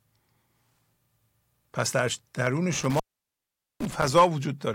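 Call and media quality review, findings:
Intermittent contact, 2.73 to 4.07 s. Speech drops out with crackle at the break and remake edges; faint hiss only while open, about 0.81 s of open time within the span. Probable component: loose cable or plug. Mechanism: conductor momentarily losing contact, interrupting signal path.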